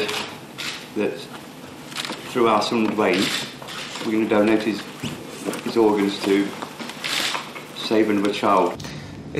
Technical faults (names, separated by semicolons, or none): none